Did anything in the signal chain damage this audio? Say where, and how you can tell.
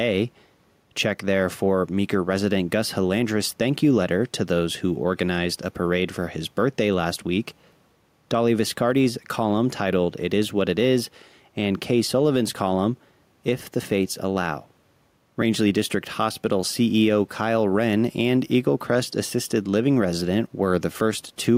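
Yes: gain pumping runs throughout the speech. The room noise sits about 44 dB below, and the gain swings roughly 5 dB, likely from excess input gain hitting a fast limiter.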